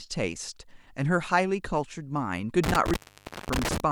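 From 2.64 to 3.80 s, intermittent contact breaks the speech. A loose connection opens, cutting the sound for about 545 ms, with crackle at each edge.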